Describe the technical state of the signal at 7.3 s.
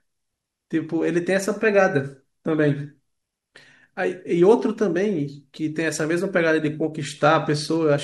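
At 7.3 s you're in a Bluetooth SBC bit pool drop running from 6.90 s to the end at 8.03 s. The link got squeezed, and the sound points to the bit pool falling from about 31 to 14, near 99 kbps. Upper sub-bands get starved, so the speech turns dull with a gritty noise.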